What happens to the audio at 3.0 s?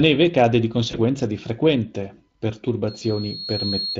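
A loudspeaker feedback squeal is underway from 2.87 to 3.99 s: the microphone re-amplifies its own loudspeaker output at 4.3 kHz, a tone that swells over roughly 0.7 s to just below the speech level. Inside it, from 2.99 to 3.03 s, VoIP packet loss concealed by the speech codec replaces 20 ms of audio, consistent with one lost frame, with an extrapolated, fading fill.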